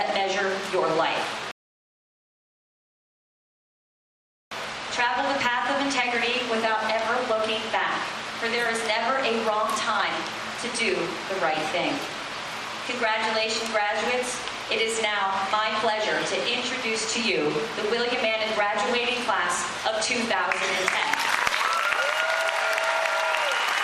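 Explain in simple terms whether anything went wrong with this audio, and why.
A rebuffering stall hits at 1.51 s: the audio goes silent until 4.51 s, then carries on exactly where it stopped. The player ran out of downloaded audio and waited for more to arrive, so nothing is missing, but about 3 seconds of dead air are added.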